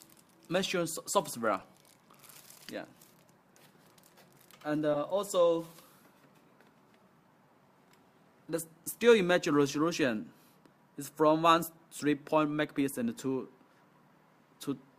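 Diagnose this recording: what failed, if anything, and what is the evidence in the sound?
The codec stage failed: a corrupt frame was decoded. There are two short bursts of misplaced energy. The first runs from 1.59 to 1.64 s and spans a few frames. The second, from 4.94 to 4.96 s, covers about one frame and is much louder. Flipped bits inside each compressed frame were not caught. The decoder played them, and the wrong gains or misread codes put energy at the wrong frequencies for the frame's duration.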